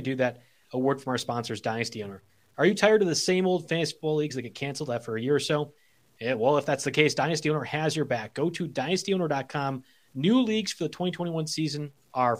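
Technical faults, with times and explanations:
Throughout, low bit depth without dither: the speech carries a grainy, rough edge that rises and falls with the sound itself, most audible on quiet syllables and decaying word endings, which turn gritty and sputter instead of fading smoothly. The likely cause is truncation to about 10 bits with no dither, so the rounding error tracks the signal as distortion rather than steady hiss, sitting somewhere around 45 dB below the speech.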